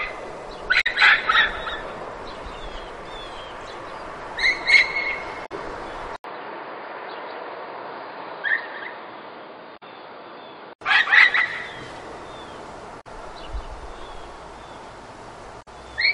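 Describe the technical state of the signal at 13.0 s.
At 13.0 s there's a short burst of damaged data in the compressed stream, running from about 13.00 to 13.07 s, so roughly 70 ms. A patch of the encoded bytes there got corrupted, so the decoder misreads those frames, loses its sync and has to hunt for the next valid frame header before it can carry on. What you hear is a brief chirp, squawk, click or short hole cutting into the sound right at that point.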